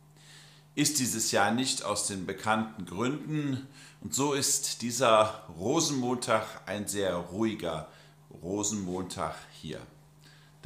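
Nothing in the recording stood out as a technical problem on listening.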